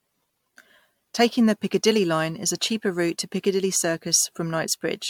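From start to end the speech has a swirly, smeared, hollow quality, with softened consonant attacks and a watery texture that is worse than a single encode at this quality would give. The spectrum stops at about 19.9 kHz. The likely cause is generation loss: the material appears to have gone through around five successive MP3 encodes near 100 kbit/s, each pass requantising on a shifted frame grid so that noise and spectral holes accumulate.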